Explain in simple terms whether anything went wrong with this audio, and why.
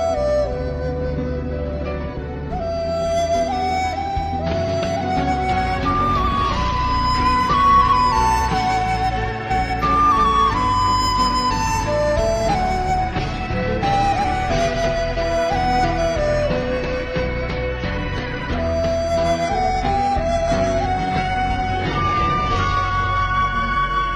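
Something did go wrong near the end. At 19.45 s the sound suddenly loses its sparkle and stays that way until the clip finishes. This is an adaptive stream at a lower bitrate. The connection slowed, so the player switched to a much smaller, cheaper copy of the audio. It did this without a gap. In that copy, everything above 11 kHz is gone, so the sound turns dull.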